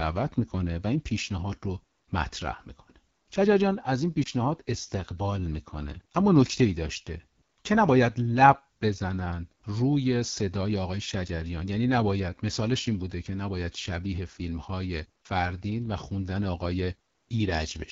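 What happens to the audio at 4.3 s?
A lost AMR speech frame occurs from 4.23 to 4.28 s. One 20 ms frame failed its checksum, so the decoder reused the previous pitch and vocal tract settings at reduced gain, giving a brief dip or warble. Around it, the AMR wideband (HD Voice) codec at 8.85 kbit/s leaves the speech plainly rough and raspy.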